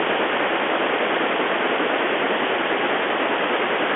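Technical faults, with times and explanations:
Throughout, Bluetooth CVSD headset codec: the speech sits in a telephone band of 300 Hz to 3.4 kHz, with nothing above 3.7 kHz. Each sample is one up-or-down step, fitting a 64 kbps stream. Loud highs outrun the step, so s sounds scratch over granular hiss.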